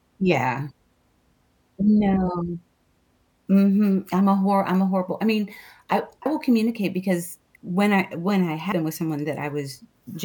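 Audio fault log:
6.26 s, compressed frames skipped: after "horrible I mean I", about two 32 ms frames vanish, so the audio jumps forward.
8.72 s, compressed frames skipped: after "when I when I", roughly seven 32 ms frames go missing, a longer jump of about 0.2 s.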